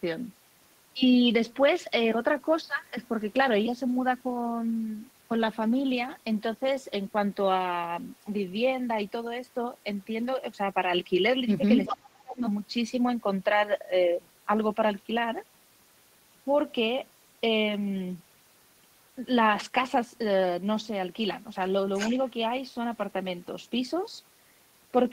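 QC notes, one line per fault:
11.85–11.94 s and 21.96–22.15 s, echo leak: A delayed copy of the talker comes back about 385 ms late. It sits roughly 10 dB under the direct speech. It arrives as short scraps, not long stretches. The cause is likely a far end on a loudspeaker whose echo canceller left some residue. That residue went back down the line. The fixed 385 ms delay both times points to the same round-trip path.
11.93–12.43 s, speech suppressed in double talk: Right as the first echo scrap ends, the talker's level drops sharply, by roughly 30 dB at its deepest. The affected stretches add up to about 0.4 s in all. Both ends were sounding at once here. The echo canceller likely could not tell the local talker from returning echo. It turned everything down together, so the speech dips.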